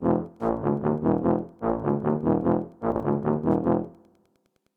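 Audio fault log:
Throughout: Wi-Fi interference, a faint, steady ticking far below the sound, repeating every 102.4 ms (just under ten per second) as a nearby radio's beacon is rectified by the audio circuit. Unlike mains buzz, it is a train of discrete ticks rather than a continuous tone.
2.92 to 3.0 s: Chunks out of order. A 40 ms chunk arrives one chunk late and plays after the one that should follow it, leaving three hard joins heard as a brief jumble. Unlike a dropout, no audio is missing, only rearranged.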